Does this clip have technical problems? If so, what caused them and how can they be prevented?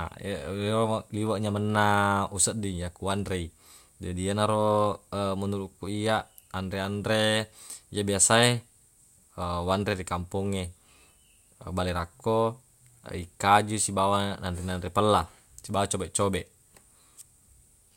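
No, no technical faults here.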